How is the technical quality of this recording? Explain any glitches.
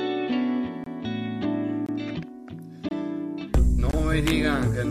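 The recording has a gap between chunks, repeating four times, at 0.84, 1.86, 2.89 and 3.91 s. Each is a hole of about 23 ms, spaced 1.0 s apart. That spacing suggests the audio was delivered in one-second chunks with silence padded at each join, so the sound just drops out briefly.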